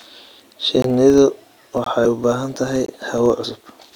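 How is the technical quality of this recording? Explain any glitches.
The technical quality is poor: the speech carries a steady buzz and is broken by three regular dropouts and a late jump.

Throughout, a filter restarted on every block produces a 25 Hz buzz, which fits processing blocks of about 40 ms. Each block's filter begins from silence instead of continuing from the previous block, so a small transient appears at every block boundary. It is heard as a rough buzz that rises and falls with the loudness of the speech. On a spectrogram it shows as evenly spaced faint vertical lines every 40 ms. The waveform shows tiny regular spikes that are larger where the speech is louder.

At 0.82, 1.84 and 2.86 s there is a gap between chunks, each 20 ms long and 1 s after the previous one. The audio seems to arrive in one-second chunks with a short stretch of silence inserted at each join. No speech is lost, but it stops abruptly and resumes. 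The gaps sound like brief hard-edged holes at a steady rhythm. On a spectrogram they appear as thin full-height blank stripes. The waveform drops to near silence between sharp edges.

At 3.43 s, compressed frames were skipped. Several frames of the encoded stream, around 50 ms of audio, were never played, so the speech jumps ahead. On the spectrogram the harmonics shift abruptly at the seam. The waveform shows a discontinuity at the join.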